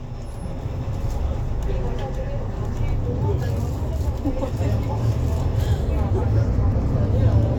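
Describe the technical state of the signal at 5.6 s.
At 5.60 s the signal shows damaged data in a compressed stream: a brief corrupted stretch, under 20 ms long, where the encoded bytes no longer decode correctly. The decoder misinterprets the bad frame, loses frame sync and has to hunt for the next valid header before resuming. The result is a short glitch in the sound, heard as a chirp, squawk, click or short hole.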